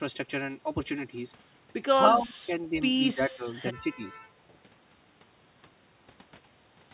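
An echo canceller that likely could not tell the near talker from loudspeaker echo while both sides spoke pulled the speech down with it, so this is speech suppressed in double talk. From 2.19 to 2.79 s the speech dips by about 10 dB in short patches. From 3.14 to 4.22 s it drops deeper, about 15 dB, in broken fragments. Across the narrowband sound, which stops near 4 kHz as in a G.711 call, the speech thins and gaps out.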